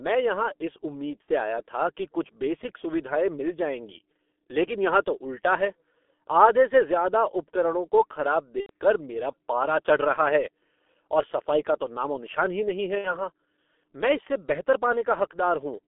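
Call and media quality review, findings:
G.723.1 codec, whole call: low-rate speech coding, sound fits roughly 6 kbit/s, line band 250 Hz to 3.5 kHz. Slow-updating voice model over 30 ms frames smears detail: heavily damaged, muffled, hoarse speech with blurred consonants and no top end.

VoIP packet loss concealed by the speech codec, 1.22–1.31 s, after "यहाँ इस उम्मीद", before "आया था कि कुछ": roughly 60 ms of audio missing, fitting two 30 ms frames. Decoder reuses last pitch and filter with falling gain. Speech stretches into a fading buzzy tone or coloured noise.

Same fault, 8.60–8.70 s, after "ज़्यादा उपकरणों को खराब", before "कर मेरा पारा चढ़": roughly 90 ms gap, fitting three frames. Longer extrapolated buzz or noise fading out, then weak, distorted recovery while the codec state rebuilds.

Same fault, 12.99–13.26 s, after "नामो निशान ही नहीं": roughly 60 ms lost, but disturbance runs about 0.27 s. 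Concealment tone decays, and the frame-to-frame dependency keeps speech weak and distorted well after packets resume.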